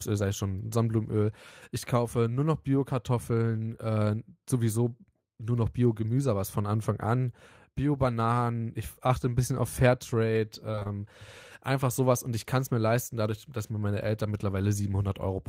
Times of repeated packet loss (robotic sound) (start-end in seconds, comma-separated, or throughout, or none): 10.71-10.87